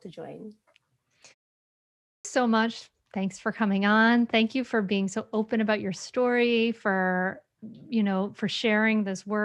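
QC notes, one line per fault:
1.89–2.25 s, clipped start after a pause: the output was still waking after the 0.63 s silence, swallowing 0.36 s, so the speech jumps in abruptly.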